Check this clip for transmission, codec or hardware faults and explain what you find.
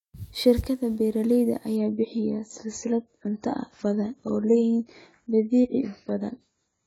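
One fault: from 1.76 s to the end, the adaptive stream switches to a lower bitrate after the connection slows. The sound loses everything above 7.6 kHz and grows artefact-laden, which fits AAC dropping from 96 to 16 kbit/s. Unlike a dropout, the change is abrupt with no gap.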